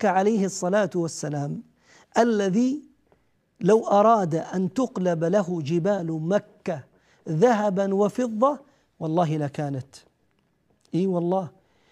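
No audible technical faults anywhere in the recording.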